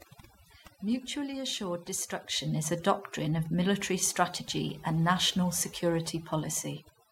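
A speech recording where, throughout, the pauses collapse into near silence dotted with twinkling specks. This is overdone noise removal: the noise reduction was set too strong, cutting individual frequency bands near its noise estimate and taking quiet parts of the voice with them.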